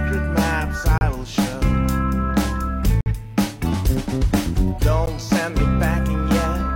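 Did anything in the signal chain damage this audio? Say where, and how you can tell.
Yes, there's a gap between stream segments at the playback stage. The music drops to dead silence with hard edges at 0.98 to 1.01 s, 3.01 to 3.06 s, and again at 5.06 s, holes of roughly 32, 52 and 14 ms. They land about every 2 s, which lines up with segment boundaries. The timestamps of adjacent segments don't quite meet, so the player pads the space with silence. Nothing's actually missing, just time inserted.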